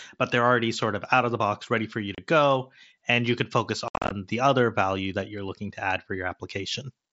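At 2.15 to 2.18 s, voice packets between headset and phone were lost with no concealment, the unconcealed Bluetooth headset packet loss, leaving 30 ms empty. The speech drops into a short hole with abrupt edges. From 3.88 to 4.11 s the losses scatter: 172.5 ms goes missing across 225 ms, the longest single gap 67.5 ms, so the speech through that stretch sounds chopped and crackly. The wideband mSBC path carries the speech in between.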